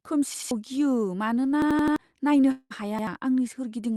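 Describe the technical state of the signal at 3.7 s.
At 3.7 s the speech is intact, with no dropout, glitch or distortion, only the steady top-end limit near 12 kHz that comes from passing through the Opus call path.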